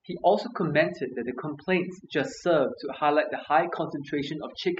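Throughout the clip, a noise reduction stage set far too aggressively is at work: overdone noise removal. Any frequency band that sits close to the tool's estimate of the background noise is pushed right down or switched off, and the quieter parts of the speech fall below that line and are stripped away too. The pauses drop to near silence scattered with twinkling, warbling specks.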